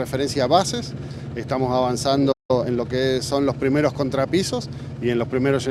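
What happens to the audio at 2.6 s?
At 2.6 s the audio is hurried along at its normal pitch, running at about 1.5 times its usual pace from 2.51 s to 2.85 s. This is time-compressed catch-up: the player is working off a backlog by cutting out small slices of the buffered audio and cross-fading the joins, so less time passes in the output than in the material, without shifting the pitch.

That backlog comes from the playback stall just before it. The sound stops in mid-flow at 2.32 s and stays silent for roughly 170 ms until 2.51 s, then resumes. The likely cause is that the player ran short of data or its playback thread was blocked, leaving the output with nothing to play until it recovered.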